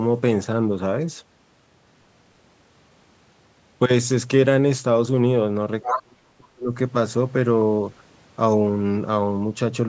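From 5.83 to 6.02 s, the other side's voice leaking through is heard. The likely cause is the echo canceller leaving part of the loudspeaker signal in the microphone feed. A brief second voice appears, sitting only a little below the main speech.

Overlapping it, from 5.86 to 6.7 s, comes speech suppressed in double talk. With both sides active at once, the canceller likely could not separate talker from echo and turned everything down. The talker's speech sinks very deeply, nearly to silence, before recovering.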